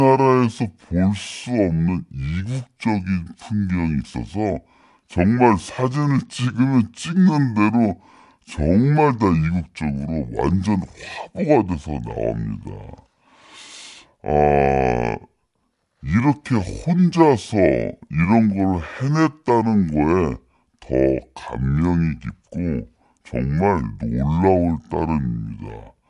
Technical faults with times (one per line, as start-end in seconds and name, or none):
0.00-26.09 wrong sample rate